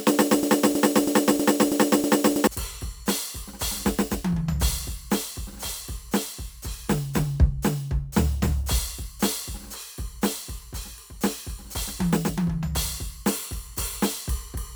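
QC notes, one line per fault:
0.43–2.47 s broken-record loop. A 0.32 s slice of music repeats six times. Playback likely stalled, resending its last fragment. The intended music is lost.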